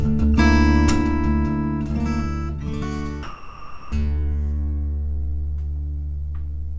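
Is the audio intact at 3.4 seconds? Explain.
No, sound dropped by the voice detector from 3.23 to 3.92 s: the sender likely judged the audio as background, so 0.69 s is replaced by steady comfort noise.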